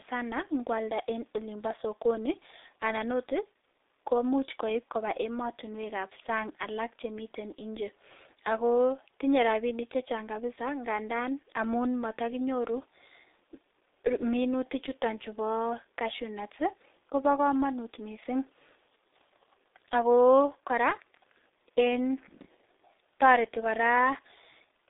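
From start to finish the speech runs through G.723.1 coding, and it's heavy: there's nothing above about 3.8 kHz, and the band sits roughly between 250 Hz and 3.7 kHz. The slow-updating voice model leaves it muffled and hoarse, with smeared consonants, which fits the codec's higher-rate mode around 6.3 kbit/s.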